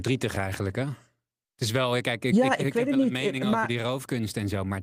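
Throughout the speech there is clock drift between sender and receiver: the sender's clock runs about 2% slow, so audio arrives a little behind the rate the receiver plays it. The jitter buffer keeps draining, and the receiver has to stretch the stream to avoid running dry. Unlike network jitter, which comes and goes, this pressure is steady and always points the same way, so the timing faults keep recurring instead of clustering around one bad moment.

From 0.63 s to 4.66 s, repeated timing corrections make up for that shortfall. The receiver repeats small pieces of sound, bringing playback to about 98% of normal speed and adding roughly a tenth of a second over the stretch. The repeats are unevenly spaced and, if heard at all, come across as faint hiccups or a slightly unsteady, dragging tempo. What sets them apart from packet-loss concealment is that the audio is only lengthened, always in the same direction.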